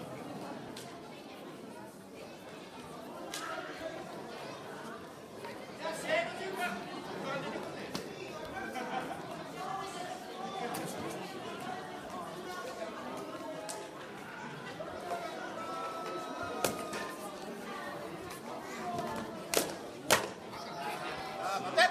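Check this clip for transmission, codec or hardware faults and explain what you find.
Four abrupt skips appear, at 0.68, 3.07, 12.46 and 17.66 s, each a point where the sound jumps forward with no gap. This is likely a dropped buffer (overrun): the capture side fell behind, hardware overwrote unread samples, and the surviving audio was spliced end to end, losing roughly 40 ms each time. On a waveform each shows as a sudden discontinuity in level or phase; on a spectrogram, a thin vertical broadband line with the pattern shifting abruptly across it.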